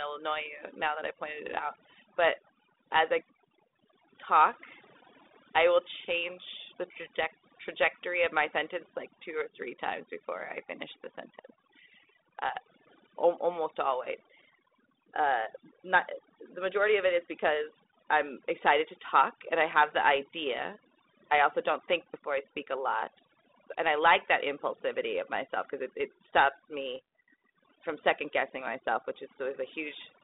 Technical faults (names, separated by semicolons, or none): overdone noise removal; bit errors on an ADPCM link